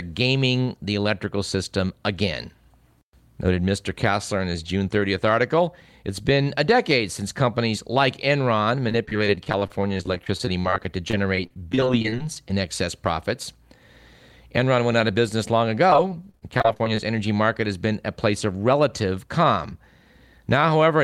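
Repeated packet loss (robotic sound) hits the speech from 8.89 to 12.50 s, ending just before "in excess profits", and again from 15.90 to 16.99 s, between "out of business long" and "energy market has been". Audio kept arriving late or not at all, leaving holes of up to 37 ms and 28 ms. Each hole was bridged by stretching the preceding sound, covering about 17% and 21% of those stretches, so the voice turns choppy, with pieces missing.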